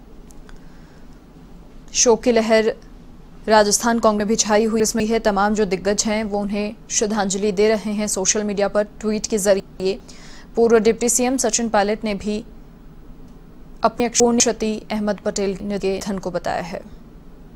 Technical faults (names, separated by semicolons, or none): chunks out of order